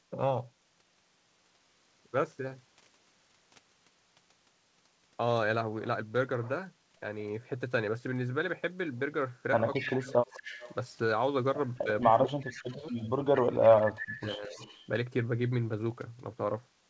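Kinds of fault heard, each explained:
Echo leak, at 9.73 to 10.75 s, 11.76 to 13.68 s and 14.2 to 14.86 s: a faint delayed copy of the speech trails the original by 221 ms, sitting roughly 15 to 25 dB below it and growing weaker with each occurrence. This most likely comes from a far-end loudspeaker whose sound reached its microphone and was not fully removed by the echo canceller, so the residue was sent back down the line.
Speech suppressed in double talk, at 9.78 to 10.51 s, 11.83 to 12.84 s and 13.71 to 14.6 s: the main speech sinks sharply while the other side is also active, dropping by roughly 20 to 30 dB for around 0.7 s each time. The likely cause is an echo canceller that could not separate the local talker from the returning echo and attenuated both together, leaving the speech dipped.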